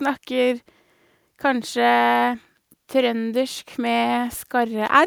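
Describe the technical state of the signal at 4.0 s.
At 4.0 s the speech signal is intact, with no audible dropout, distortion, glitch or other technical fault at that moment.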